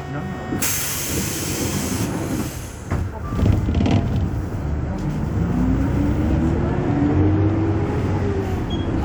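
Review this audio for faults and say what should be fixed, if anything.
Nothing in this audio needs to be fixed, as no faults can be heard in it.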